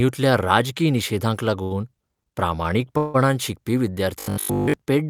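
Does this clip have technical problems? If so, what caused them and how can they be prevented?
Yes. A short stall from a late packet at 1.63 to 1.74 s holds the sound about 74 ms while the jitter buffer waits; the waveform shows a smeared, repeated stretch. A deeper jitter buffer prevents it.

A call audio freeze at 2.98 to 3.16 s continues the last sound as a fading buzz for about 166 ms, likely from delayed packets; the spectrogram shows smeared, flattened bands. Adaptive jitter buffering prevents it.

Robotic sound from repeated short buffers at 4.20 to 4.82 s turns the sound into a rigid 50 Hz buzz, which fits repeating a 20 ms buffer, with most of the real audio skipped; the spectrogram shows evenly spaced harmonic lines. Steadier audio delivery and larger buffers prevent it.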